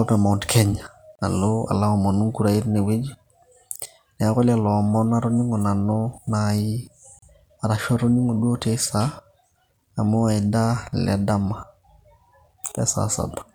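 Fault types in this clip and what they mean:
Gap at a join of encoded pieces: the speech halts for about 35 ms at 1.15 and 7.19 s, 6 s apart, where separately encoded pieces meet with start delay and end padding left in. Unlike a dropout, nothing is lost, and the sound resumes where it stopped.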